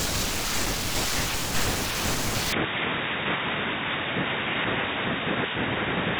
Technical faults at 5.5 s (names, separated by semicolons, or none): input switched to a poorer device